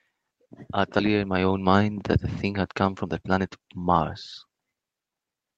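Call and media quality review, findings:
Skip ahead, 0.99 to 1.01 s: abrupt forward jump, roughly a second of speech gone, no fill. Jitter buffer likely discarded queued audio on overflow. Waveform shows envelopes butt-joined with no gap; spectrogram shows formant tracks breaking discontinuously.

Jitter buffer speed-up, 1.09 to 1.96 s: speech runs at 114% with pitch unchanged, hurried. Receiver trimming pitch periods to drain excess buffer, about 150 ms removed. Waveform shows fewer periodic cycles; spectrogram harmonics stay level while syllables compress.

Jitter buffer speed-up, 2.46 to 4.70 s: same 114% rate, pitch held, around 300 ms removed over the stretch. Buffer still above target. Spectrogram shows syllable spacing tightened.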